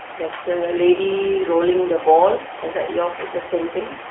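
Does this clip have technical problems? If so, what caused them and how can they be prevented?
Yes, the whole clip has gone through the AMR narrowband mobile codec. The band sits roughly between 300 Hz and 3.5 kHz, with nothing at all above 3.8 kHz, which points to 8 kHz phone-line sampling. The codec rebuilds speech from a vocal-tract model excited by a handful of pulses, and at this level of damage the voice comes out buzzy and synthetic, which fits a low rate around 6.7 kbps. To prevent it, record or route the call over a wideband path, or at least a higher AMR mode.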